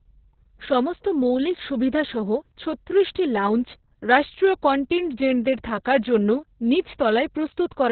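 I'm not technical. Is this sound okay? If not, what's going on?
No. The whole clip carries heavy Opus voice compression damage. The speech was squeezed through a very low-quality voice coder that keeps only the narrow telephone-style band, with nothing above about 4.4 kHz. It also rebuilds the voice's buzz and breath from a rough approximation. The result is muffled, hoarse and slightly robotic from start to finish, and the coder works in long chunks of 60 ms.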